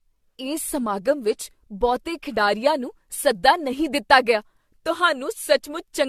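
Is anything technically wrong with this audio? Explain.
Yes. Throughout the speech, generation loss: swirly, hollow smearing with blurred attacks and nothing above 14 kHz, likely from about five AAC re-encodes near 64 kbit/s. That is more damage than a single encode would leave.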